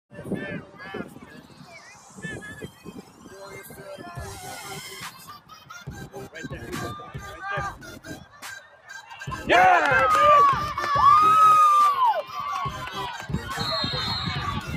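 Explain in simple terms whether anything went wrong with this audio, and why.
Yes. A noise suppressor applied to music or sounds was left on the whole time. It is built for speech, so it treats steady, lingering sound as background noise and turns it down. The level keeps swinging up and down.

At seven moments, the sound is cut by the noise suppressor more than elsewhere: 0.62 to 0.81, 1.05 to 2.22, 2.67 to 3.33, 3.67 to 3.82, 5.11 to 5.7, 8.17 to 8.44 and 8.6 to 9.11 seconds. There the sound dips quieter for a moment.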